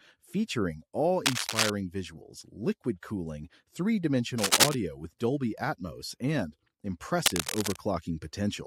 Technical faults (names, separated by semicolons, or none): cable scratch noise